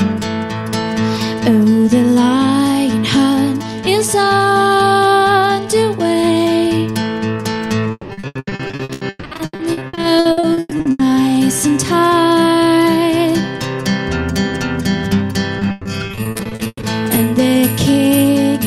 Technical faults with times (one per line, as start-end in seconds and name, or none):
7.91-11.01 repeated packet loss (robotic sound)
15.59-16.85 repeated packet loss (robotic sound)